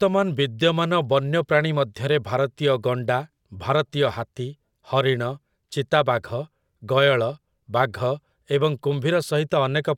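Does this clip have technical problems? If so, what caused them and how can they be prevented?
No, this clip has no technical problems, so there is nothing to trace or prevent.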